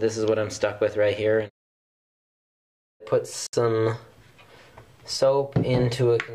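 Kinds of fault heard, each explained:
Gap at a join of encoded pieces: the sound drops out for about 65 ms, from 3.47 to 3.53 s, with smeared edges, then resumes where it stopped. Separately encoded pieces were joined untrimmed, leaving each encoder's start delay and final-frame padding.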